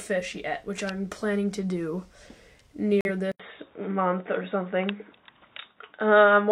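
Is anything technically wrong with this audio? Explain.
Yes, two faults. Corrupt frame muted: at 3.01 to 3.10 s the decoder rejected damaged compressed data, leaving an abrupt 94 ms silence, which fits two lost frames. Input switched to a poorer device: from 3.32 s the recording likely moved to a narrower-band input. After an 80 ms silence, nothing above 3.8 kHz remains, the level shifts by around 5 dB, and new background noise sits around 45 dB below the signal.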